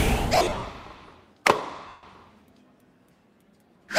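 From 0.35 to 0.65 s, lost LE Audio frames break the sound into a noisy smear: about 200 ms of gaps spread over 300 ms, with the longest run around 50 ms. The LC3 decoder covers each gap by repeating the previous spectrum with random signs, then fades it. A spectrogram shows harmonic lines blurring into diffuse patches, and the waveform sags in amplitude. A second loss of 150 ms at 1.88 to 2.03 s is smeared and fading in the same way.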